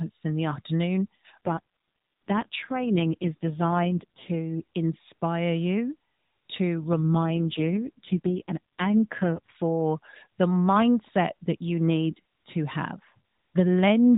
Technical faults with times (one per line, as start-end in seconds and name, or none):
1.45-4.32 AMR rate drop
6.78-9.57 AMR rate drop